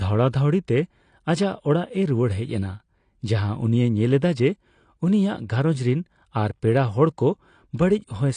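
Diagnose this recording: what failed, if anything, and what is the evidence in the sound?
The codec stage failed from start to finish. The speech stops at 9.8 kHz and carries plainly audible smearing with a warbly texture. The likely cause is AAC compression, AAC-LC starved of bits in a way that fits 32 kbps, so the encoder drops the top band and coarsely quantises the rest.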